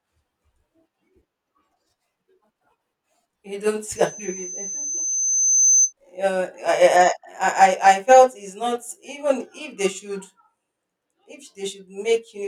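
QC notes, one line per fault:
3.96–5.93 s, loudspeaker feedback squeal: a single tone near 6.2 kHz rises out of the speech and swells over roughly a second and a half until it sits about 5 dB above the talker, then stops at 5.93 s. The microphone was hearing its own loudspeaker, and at that frequency the loop gain passed one, so the tone kept feeding itself. Unlike a steady whistle or mains hum, it starts from nothing, grows, and holds one pitch.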